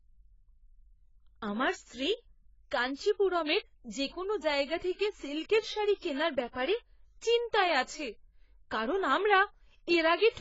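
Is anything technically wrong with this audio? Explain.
Yes, the speech carries AAC compression damage throughout. The sound is dull and smeared, with nothing above 7.6 kHz and fizzy, warbling sibilants, likely from heavy AAC-LC coding at a very low bitrate, around 16 kbps. A spectrogram shows a flat ceiling at 7.6 kHz.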